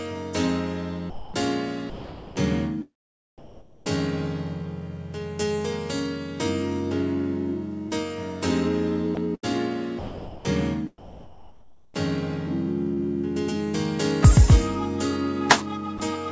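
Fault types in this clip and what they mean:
Sound chopped by the voice detector: sound flickers in and out around 1.10–2.36 s and 9.15–11.94 s, likely a detector toggling repeatedly, unlike a single clean dropout.
Comfort noise in place of the background: from 3.38 to 3.86 s, the quiet background becomes featureless steady hiss, about 2 dB different, likely synthetic fill rather than lost sound.
Short concealed packet loss: a 20 ms gap near 7.89 s is bridged by continuing the preceding sound, giving a brief smear.
Sound dropped by the voice detector: at 15.98 s a 20 ms piece of sound gives way to steady noise once, likely the detector misjudging it as background.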